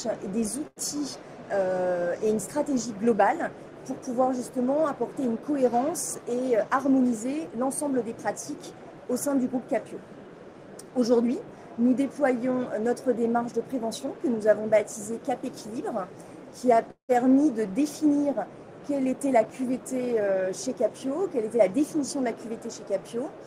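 At 0.67 to 0.79 s, a packet arrived late and the jitter buffer ran dry, causing a short stall. The receiver stretched the last sound for 90 ms until the packet came, then resumed where it left off, so the sound is held too long with a slight buzz or dip.

From 6.57 to 7.70 s, a jitter buffer speed-up occurs. The buffer held more audio than its target, so the receiver trimmed short pitch-period pieces repeatedly, removing roughly a tenth of a second. The sound runs about 8% fast at unchanged pitch and feels hurried. The same happens at 19.05 to 20.90 s, about 9% fast, cutting around 150 ms.

At 16.91 to 17.12 s there is a call audio freeze. The sound is continued as a fading buzz or hiss for 179 ms, including 100 ms of silence, then carries on from the same point. The likely cause is packets held up in transit emptying the jitter buffer.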